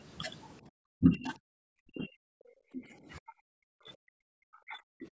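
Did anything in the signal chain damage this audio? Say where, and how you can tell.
Yes. A doubled audio track runs through the whole clip. A full-band copy sits about 5 dB down, roughly one second behind the original. It is likely a second capture path or an edit holding two copies. It is not acoustic echo, because the copy has no decay or room colour.

Speech is suppressed in double talk at 0.95–1.33 s, 1.81–2.55 s, 2.72–2.94 s and 3.19–5.07 s. The level drops by up to about 40 dB, or only about 15 dB at 2.72 s. This likely comes from the call's echo canceller ducking its own talker.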